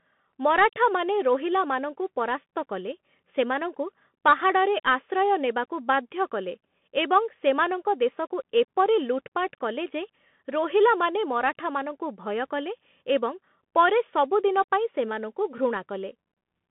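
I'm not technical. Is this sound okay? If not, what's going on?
No. The whole clip, start to finish, has gone through a Bluetooth CVSD headset codec, the basic phone-call mode of a wireless headset. Nothing above 3.8 kHz survives, so the speech sounds thin and muffled. S sounds turn scratchy, and a grainy hiss sits underneath.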